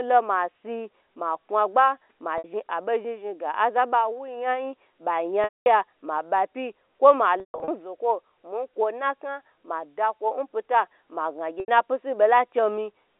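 At 2.38 s, a 60 ms gap shows packet loss with pitch repetition. The receiver loops the last pitch period, so the sound briefly holds and buzzes. At 5.44 s, 220 ms drops out. The repeat fades to silence before the speech cross-fades back. After "koi ma" at 7.4 s, losses scatter over 280 ms, the longest run 140 ms. After "pyita ma" at 11.6 s, an 80 ms loss follows. The narrow telephone band is heard throughout.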